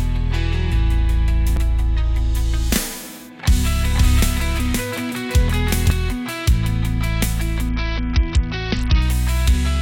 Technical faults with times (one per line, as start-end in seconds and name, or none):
1.56 CD skip
3.90-5.90 doubled audio track
7.69-9.02 Bluetooth SBC bit pool drop